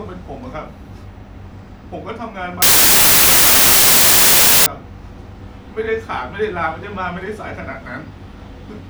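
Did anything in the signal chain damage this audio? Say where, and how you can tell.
Yes. From 2.62 to 4.66 s the speech turns into loud, harsh noise with a slowed, lower-pitched trace buried inside, running at 0.667 times speed. This is a wrong sample width error in sample-format conversion: packed 24-bit data read as 16-bit, splicing bytes across samples.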